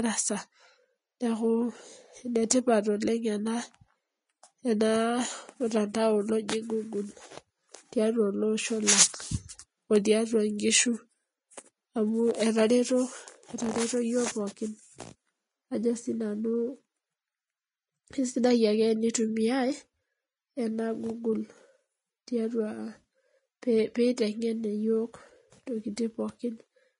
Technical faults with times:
0.00-26.99 Vorbis compression
23.62 pre-echo

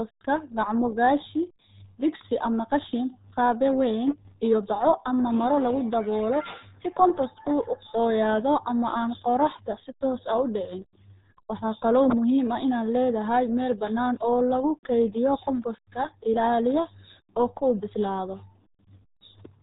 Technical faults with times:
0.00-19.63 RealAudio 14.4 codec

